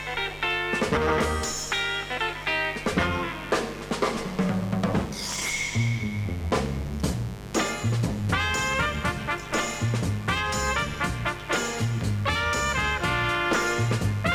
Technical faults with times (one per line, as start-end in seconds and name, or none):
0.00-14.35 mains buzz